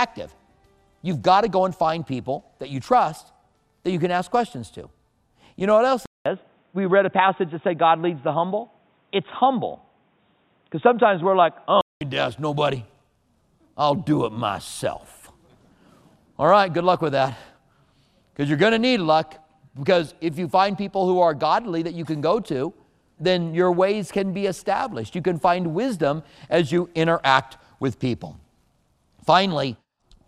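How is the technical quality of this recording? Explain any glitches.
The recording has one clear glitch, an input switched to a poorer device. From 6.06 s to 12.01 s the sound turns dull and boxy. Nothing is heard above about 3.8 kHz. A silence of about 200 ms marks the switch. A faint new noise floor sits far below the signal, and the level stays about the same. The likely cause is the system swapping to a narrower-band input, such as a headset's call profile, then switching back at 12.01 s.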